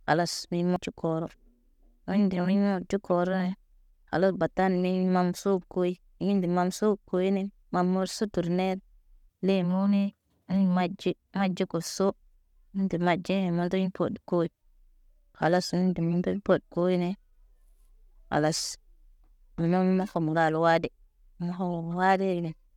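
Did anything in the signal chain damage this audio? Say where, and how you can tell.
Yes. At the playback stage, a CD skip occurs at 0.76 s, near the start of the speech. A very brief mute of a couple of milliseconds produces a tick, and the speech resumes from a different point rather than continuing smoothly. This happens when the laser is knocked or misled by a disc flaw and lands on a different turn of the spiral. The player briefly silences output, then carries on reading from the new position.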